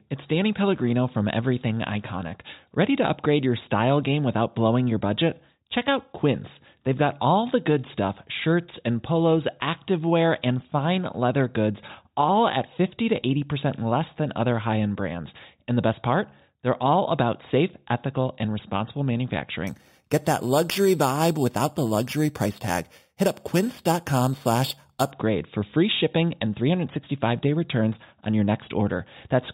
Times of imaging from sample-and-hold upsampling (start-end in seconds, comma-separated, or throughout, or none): 19.67-25.11